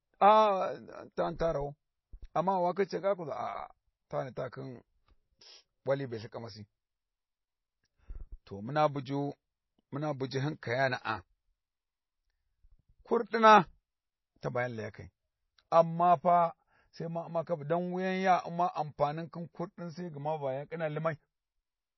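From start to finish the speech carries plainly audible codec damage, likely from MP3 compression, at a rate that fits a low bitrate around 24 kbps. With so few bits to spend, weaker frequency lines are dropped and then return from frame to frame, giving the sound a watery, swirly texture. On a spectrogram the content stops abruptly at 5.8 kHz, leaving empty space above, while the band below shows patchy, flickering gaps as components switch on and off.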